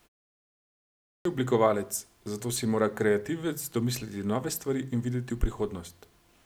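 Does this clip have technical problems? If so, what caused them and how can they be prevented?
Yes: a clipped start after a pause at 0.77 s, where the output device, idle through the opening silence, took about 0.48 s to wake, swallowing speech until 1.25 s. Keeping the device active, or sending a short lead-in before speech, prevents this.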